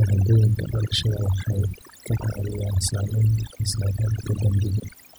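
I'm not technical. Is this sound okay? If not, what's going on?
No. Overdone noise removal runs through the whole recording. A cleanup tool was set far too strong, so the gaps between phrases drop to near silence with twinkling specks. Ordinary hiss would be steady; here the background flickers in and out.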